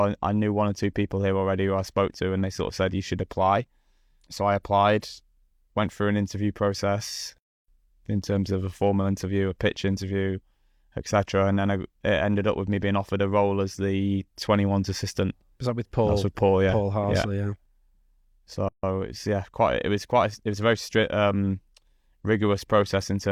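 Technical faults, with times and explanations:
18.69–18.83 s: gap at a join of encoded pieces. The speech drops out for about 150 ms, because untrimmed encoder delay and end padding sit at the splice.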